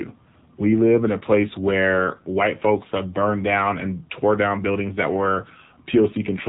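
The speech in this clip runs through an AMR narrowband mobile codec from start to finish, with plainly audible damage. Nothing passes above 3.8 kHz, and the voice has a buzzy, synthetic edge, which fits a low AMR-NB mode around 7.4 kbps. A simple low-pass filter would only dull the top end, but here the vocal-tract model rebuilds each 5 ms from a few pulses, so the voice itself sounds artificial.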